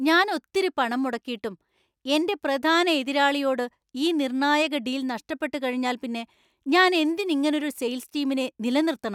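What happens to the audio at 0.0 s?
Nothing goes wrong at 0.0 s: the audio is intact, with no dropout, click or distortion at that point.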